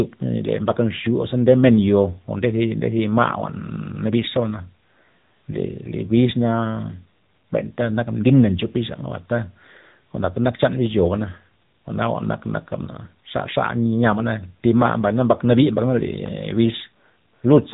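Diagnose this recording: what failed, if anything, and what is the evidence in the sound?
AMR narrowband mobile codec damage is present throughout the speech, placing the failure at the codec stage. Nothing passes above about 3.8 kHz, so sibilants and breath lose their air, and the voice has a plainly audible buzzy, synthetic edge. AMR-NB samples at 8 kHz and rebuilds speech from a vocal-tract model excited by a few pulses per 5 ms subframe. The coarseness points to one of its lower modes, around 8 kbps.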